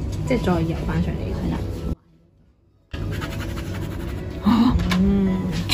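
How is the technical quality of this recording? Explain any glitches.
The recording has one clear glitch. An audio dropout to a faint residue runs from 1.94 to 2.93 s, about one second, likely where the signal feed broke while the path downstream stayed live. The sound cuts abruptly to a faint leak roughly 30 dB below normal, then snaps back.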